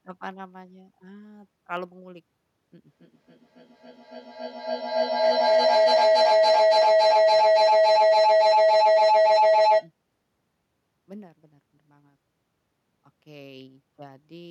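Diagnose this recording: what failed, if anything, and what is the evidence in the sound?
The driver or buffer stage most likely lost a handful of samples, a fraction of a millisecond each time, at 0.77 s and again at 1.77 s. These dropped samples make the waveform jump straight to a later value, producing two isolated sharp clicks across the speech.

From 2.86 s to 9.93 s an acoustic loop formed between a loudspeaker and a microphone on the same call, with gain above unity on each trip. The resulting feedback howl settles near 700 Hz, pulses roughly every 300 ms, and peaks about 21 dB above the speech.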